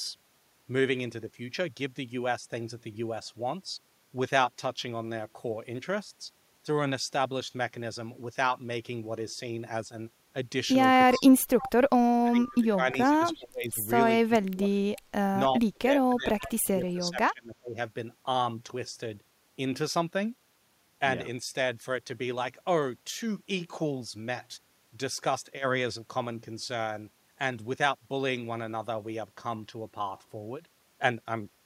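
Between 11.06 and 17.78 s the speech keeps dipping, by up to about 30 dB, at 11.06, 12.17, 14.25, 14.47, 15.29 and 15.69 s; likely speech suppressed in double talk. Faint echo leak at 11.6 and 13.35 s, a likely leftover copy about 320 ms late.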